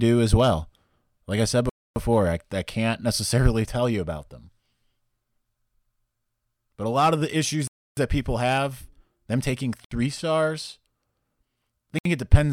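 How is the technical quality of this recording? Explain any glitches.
The speech is broken by four short dropouts to silence, the pattern of a Bluetooth stall. The gaps fall at 1.69 s after "I said" (266 ms), at 7.68 s after "lot of the issues" (296 ms), at 9.85 s after "people have them taking" (68 ms), and at 11.99 s (67 ms). Each time the audio stops dead and resumes where it left off. The likely cause is radio interference delaying packets, so the receiver's buffer emptied and playback waited for the retransmissions.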